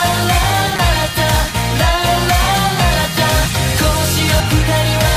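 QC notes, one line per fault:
0.76–0.79 s and 4.40 s, damaged data in a compressed stream: corrupted bytes in the encoded stream cause the decoder to misread frames and lose sync while it searches for the next valid header. The result is a short glitch, about 30 ms at the first point and a brief blip at the second.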